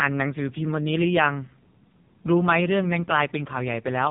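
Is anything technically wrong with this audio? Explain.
Yes. The whole speech clip has been through an AMR narrowband mobile codec, and a heavily damaged one. Nothing above 3.7 kHz survives, so the voice sounds thin and telephone-boxed. The codec rebuilds speech from a vocal-tract model fed by a few pulses every few milliseconds, and at a rate pointing to roughly 5 kbps that leaves a buzzy, synthetic edge. On a spectrogram the energy stops at a flat ceiling near 3.7 kHz, with a blank band above it.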